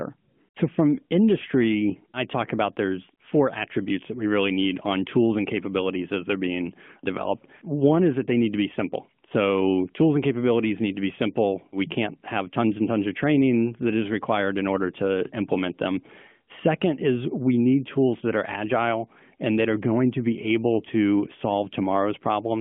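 No technical faults turn up anywhere in the recording: the speech comes over an AMR-NB narrowband mobile path at 12.2 kbps, limited to the 150 Hz to 3.4 kHz telephone band and carrying only the light coding colour expected at that rate.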